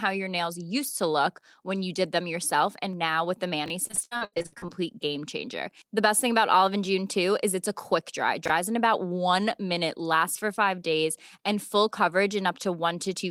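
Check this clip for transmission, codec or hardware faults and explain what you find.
Two kinds of fault are present.

Chunks out of order at 3.66–3.70 s and again at 8.46–8.50 s: a 20 ms chunk of audio plays one chunk later than it should, swapped with its neighbour. Nothing is lost, but the reordering creates three hard joins, heard as a brief jumbled blip.

Repeated packet loss (robotic sound) from 3.87 to 4.70 s: there are 15 separate gaps, the longest 73 ms. Each is concealed by extending the last sound, covering about 54% of the stretch. The result is choppy, robotic-sounding audio with fragments missing.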